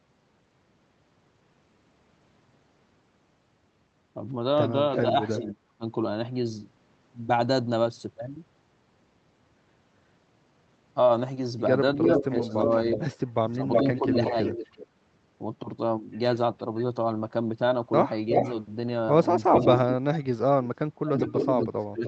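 Speech, heard over a call, with two recurring faults. An echo leak returns a delayed copy of the speech at 4.97 to 5.52 s, 12.02 to 14.87 s, 18.33 to 18.52 s, 19.55 to 20.25 s and 21.18 s to the end. The delay stays near 360 to 375 ms. The copy sits a little below the direct speech, once about as loud, and finally well below it. An echo canceller on a loudspeaker end likely failed to remove it. Speech suppressed in double talk appears at 5.38 to 5.83 s, 12.49 to 14.35 s and 19.46 s to the end. The speech dips and cuts out in pieces, sharply in the first and last spans and more gently in the middle one. Both ends were talking at once, and the canceller likely turned everything down.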